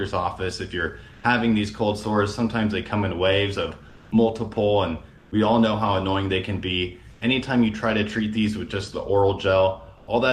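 Comfort noise in place of the background appears twice, at 3.91–4.09 s and 5.17–5.29 s: the real background gives way to smooth, featureless noise about 4 and 6 dB quieter, likely from Opus DTX. The spectrogram shows flat, textureless bands there.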